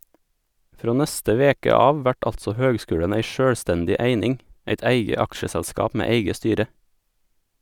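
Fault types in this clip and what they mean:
No fault types are present in this clip.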